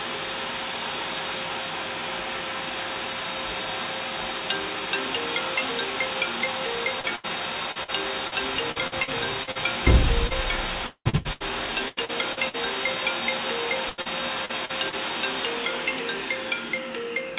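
From 7.0 to 9.58 s, 10.27 to 12.57 s and 13.90 to 14.95 s, the audio suffers repeated packet loss, heard as a robotic sound. Short dropouts, the longest about 80 ms, then 190 ms, then 82 ms, are patched by extending the preceding sound, so each stretch turns choppy, with pieces missing, with roughly a sixth to a quarter of it concealed. Throughout, nothing reaches above 4 kHz, which fits a G.711 mu-law call path.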